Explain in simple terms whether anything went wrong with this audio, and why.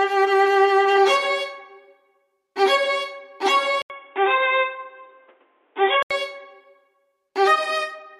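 Input switched to a poorer device, from 3.82 to 6.11 s: the sound suddenly turns dull and boxy, with nothing above about 3.8 kHz, and a faint new background hiss appears while the loudness stays about the same. A short gap of about 80 ms marks the switch. This is likely the recorder changing to a lower-quality microphone or headset input partway through, which passes a narrower range of frequencies and brings its own tone and noise.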